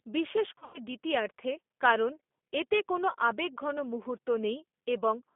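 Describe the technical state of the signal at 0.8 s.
At 0.8 s the signal is just coming out of VoIP packet loss concealed by the speech codec, which ran from 0.58 to 0.78 s. About 140 ms of audio went missing across 160 ms, with the longest gap near 100 ms. The decoder filled the holes by extending its last pitch and filter at falling gain. Because each frame builds on the previous one, the sound at 0.8 s is still weak or distorted, not yet recovered.

Underneath this, the G.729 codec runs throughout. The speech is rebuilt from a vocal tract model and sparse pulses, which fits an 8 kbit/s stream, and only a 250 Hz to 3.5 kHz band passes. The result is plainly rough, synthetic, muffled telephone-band sound.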